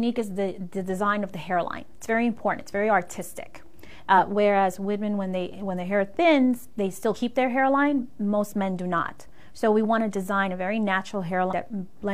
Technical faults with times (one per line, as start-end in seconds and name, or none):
4.14 compressed frames skipped
7.11-7.16 compressed frames skipped
11.47-11.53 compressed frames skipped